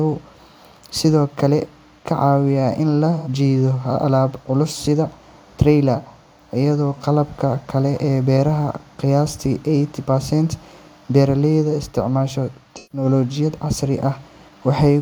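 AAC frame loss with concealment breaks up this speech clip twice, at 3.17 to 3.28 s and 12.76 to 13.05 s. The decoder rebuilt the missing audio from the last good spectrum, so each gap becomes a brief smeared, noisy patch. Their lengths fit two and three dropped frames respectively.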